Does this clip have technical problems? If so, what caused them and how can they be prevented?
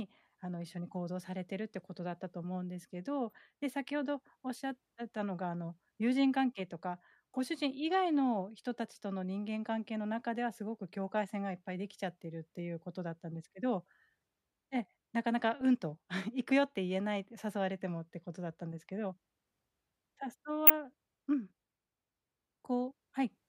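Yes. A corrupt frame was decoded three times: bits in compressed frames, a couple of frames each time, were damaged, and the decoder played them anyway. Misread gains and codes put energy at wrong frequencies, giving brief blips from 3.30 to 3.33 s (faint), at 15.61 s (louder), and from 20.67 to 20.70 s (a loud burst). Checksums or CRC checks that catch damaged frames and conceal them instead of decoding them would prevent this.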